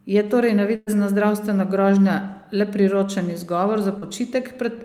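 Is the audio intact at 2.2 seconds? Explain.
Yes, the speech at 2.2 seconds is intact, with no audible fault at that moment.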